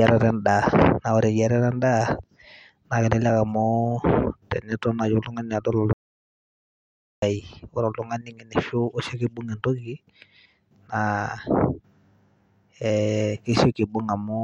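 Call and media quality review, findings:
Audio dropout to silence, 5.93–7.22 s. Speech cuts off mid-flow, about 1.29 s of silence, no room tone, then resumes abruptly. Likely input loss upstream (device disconnect, link failure or mute) while recording continued writing silence. Content in gap unrecoverable.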